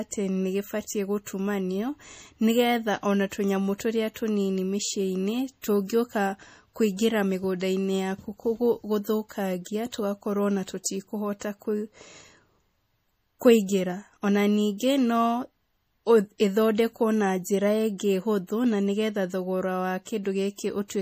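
From start to finish the speech sounds watery and swirly, with metallic chirping on s sounds, smeared consonant onsets, and nothing above 15.3 kHz. This is plainly audible codec damage, likely from MP3 compression at a low bitrate, around 40 kbps. Starved of bits, the encoder cut the treble at a fixed frequency and zeroed quieter frequency lines. Those lines flicker on and off from frame to frame, which produces the swirl.

At 14.78 to 14.80 s a hiss runs for about 26 ms ahead of a sharp attack, and the attack itself sounds softened and smeared. This is pre-echo. The codec spread its quantisation noise across the whole transform block, and the attack sat late in that block. Noise sized for the loud onset therefore spilled into the quiet moment just before it, where nothing masks it.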